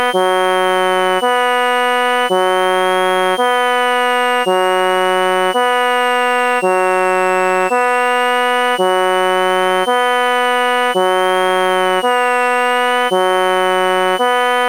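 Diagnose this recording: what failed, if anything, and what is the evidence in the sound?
A switching supply whistle runs through the whole clip, entering at the analogue stage from a power supply. A high tone near 3 kHz, wandering between about 2.6 and 3.3 kHz, sits roughly 15 dB below the audio. On a spectrogram it is a thin, drifting horizontal line.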